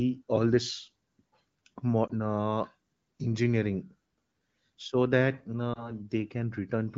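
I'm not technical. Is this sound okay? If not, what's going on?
No. There are lost AMR speech frames, a brief dip or warble at 2.07 to 2.11 s and again at 5.73 to 5.91 s, just after "so that". Radio errors corrupted a short piece of this HD Voice call, and the phone's decoder briefly filled the gap by repeating the last good sound at falling volume.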